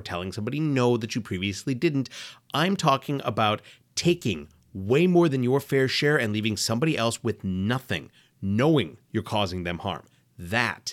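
Nothing in this recording stands out as a technical fault; there's no glitch, dropout or distortion to point to anywhere along the way.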